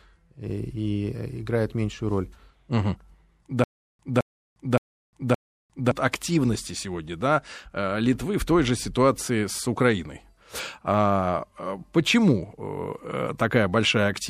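From 3.64 to 5.91 s, just before "активности сегодня да э", a stutter with silent gaps: a 214 ms burst repeats four times, each separated by 354 ms of digital silence rather than looping seamlessly. The likely cause is a stalled stream replaying its last fragment.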